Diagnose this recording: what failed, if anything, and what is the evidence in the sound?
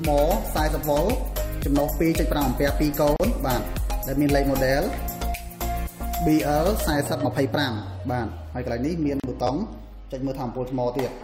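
Two separate failures are audible, one at the codec stage and one at the playback buffer.

The first is a gap at a join of encoded pieces. The sound drops out from 3.16 to 3.20 s and again from 9.20 to 9.24 s, each time for about 37 ms. The edges are smeared, and the sound resumes exactly where it stopped. The 6 s spacing points to separately encoded segments joined without trimming, so each encoder's start-up delay and final-frame padding remain as silence.

The second is a repeated buffer in the driver or buffer stage. At 7.09 s a short slice plays twice with a hard join, giving a brief click-like stutter. From 9.47 to 9.49 s a short slice sounds three times, which is heard as a short buzz. Each repeat lasts about 10.7 ms, which fits a 512-sample buffer. The device replayed the last buffer while it waited for new data that arrived late, so nothing was dropped, only duplicated.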